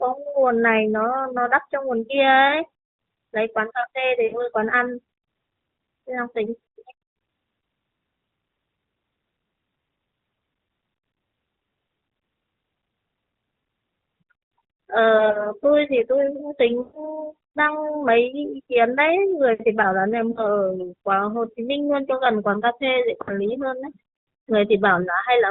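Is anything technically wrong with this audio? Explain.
Yes. The audio has lost AMR speech frames at 4.24–4.42 s, 10.54–10.56 s, 15.18–15.59 s, 16.82–17.19 s, 20.32–20.48 s and 23.22–23.39 s. Corrupted frames failed their check, so the decoder filled in from the last good pitch and vocal tract settings at falling gain. The single 20 ms loss at 10.54 s is a brief dip or warble. The 80 ms and 120 ms runs stretch the sound out and fade it. Around 15.2 s, short losses scattered over about 160 ms cause brief dips or warbles. The narrowband AMR coding itself, cut off at 4 kHz at 12.2 kbps, does only light damage.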